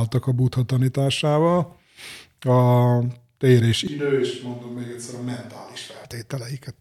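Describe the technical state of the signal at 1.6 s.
At 1.6 s the speech signal is intact, with no dropout, distortion, clipping or other fault audible at that point.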